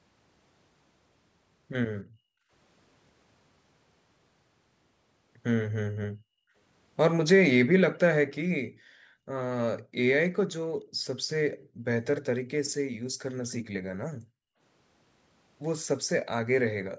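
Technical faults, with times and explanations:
2.04–2.51 s, 6.12–6.54 s, 8.69–9.31 s, 9.82–9.95 s and 14.17–14.60 s: background gated by the echo canceller. The room sound drops sharply each time, by about 29 to 40 dB at the deepest. The longest gap lasts under a second, and the shortest is a brief flicker. The echo canceller heard loudspeaker output and clamped the microphone hard. When the far end went quiet, it released and the background came straight back.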